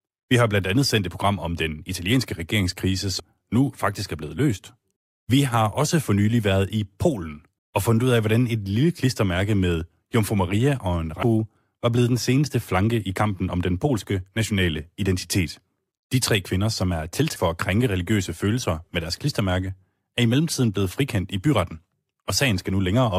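At 3.18 s, between "om den italienske regeringskrise" and "nu faktisk er blevet", a short blip marks damaged data in a compressed stream. The same glitch recurs at 11.22 s, just before "var blevet den seneste", and at 17.35 s, between "tre kvinder som er" and "for at krænke religiøse". Each time, corrupted bytes make the decoder misread a frame and lose sync until it finds the next frame header, leaving a brief glitch in the speech.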